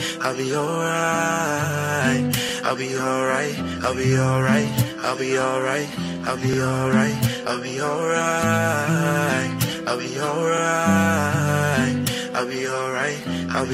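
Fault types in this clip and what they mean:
overlapping chunks: each 4-second block starts 44 ms early, so a slice plays twice at 2.49, 6.53 and 10.58 s, a stutter, not a gap.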